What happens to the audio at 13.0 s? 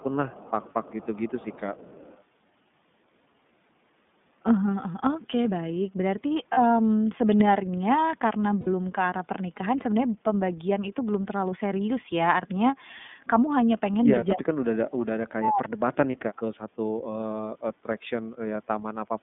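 At 13.0 s the speech is still passing through an iLBC codec, as it does for the whole clip. The codec encodes each 30 ms frame's excitation on its own, which fits its 13.33 kbps mode, and keeps only a narrow band of roughly 150 Hz to 3.6 kHz. The speech therefore sounds boxy and telephone-thin, with no air above 4 kHz, and carries a plainly audible rough, synthetic texture.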